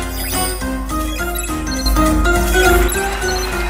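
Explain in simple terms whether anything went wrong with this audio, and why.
Something did go wrong. At 1.86 s the whole sound abruptly gets noticeably louder, background noise included, and at 2.88 s it drops back just as suddenly. This is a sudden gain jump: the volume was changed in a single step instead of being eased in gradually. The likely cause is a level setting applied instantly in the digital chain, which is why the background steps up and down along with everything else.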